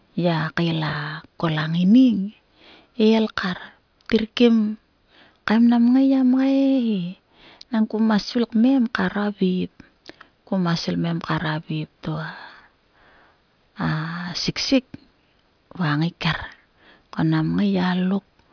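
No technical faults are audible anywhere in the recording.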